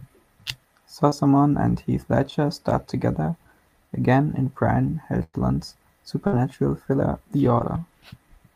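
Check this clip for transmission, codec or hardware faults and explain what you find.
Two kinds of network fault appear in this speech: brief concealed packet losses and longer bursts of packet loss.

Short concealed packet loss occurs at 1.09–1.13 s and 7.59–7.62 s. About 20 ms of audio never arrived in time. The receiver extended the preceding sound to cover it and blended back in, leaving a quick smear or wobble.

Bursts of packet loss occur at 5.23–5.35 s and 6.27–6.35 s, covering about 100 ms and 60 ms. The receiver stretched the last sound and faded it, producing a held buzz or sinking hiss. Speech then picks up further along with a stretch missing, unlike the brief patches.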